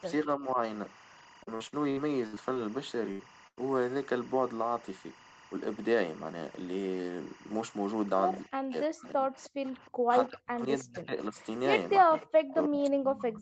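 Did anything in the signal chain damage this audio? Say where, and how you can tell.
Yes. The damage comes from the analogue wiring, the call's echo processing and the network.

Timecode bleed enters at the analogue stage. A linear timecode track or cable sits close enough to the audio line to couple into it, which fits code running at 23.976 frames per second. The code is a square wave that flips between two pitches near 1 and 2 kHz. Across the whole clip it shows up as a constant chirping warble about 20 dB below the speech.

Speech suppressed in double talk comes from the call processing. The echo canceller most likely mistook overlapping talk for loudspeaker echo and attenuated the line. Between 0.23 and 0.57 s the speech dips by about 10 dB. From 8.48 to 11.37 s it drops by as much as about 40 dB, with roughly two seconds affected in pieces. From 12.00 s to the end it again falls by up to about 40 dB.

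Repeated packet loss (robotic sound) is a network fault. Between 1.43 and 2.57 s the packets kept arriving late or not at all. Seven gaps were patched by extending the last sound, the longest about 65 ms. About a quarter of that stretch is concealment, so the speech turns choppy, with pieces missing.

A burst of packet loss hits twice, at 3.11 to 3.21 s (about 80 ms) and at 3.47 to 3.59 s (about 100 ms). Each time a run of packets went missing in transit. The receiver stretched the last sound and faded it, so you hear a held buzz or a decaying hiss. The speech then resumes further along, and the audio from the gap is lost.

Echo leak is the canceller's other failure. A loudspeaker copy of the speech slipped past it and came back delayed by about 311 ms. Scraps of it appear at 9.39 to 9.50 s, 9.86 to 9.91 s, 11.38 to 11.43 s and 12.19 to 12.27 s, about 25 to 35 dB below the speech. That pattern points to a likely residual-echo failure.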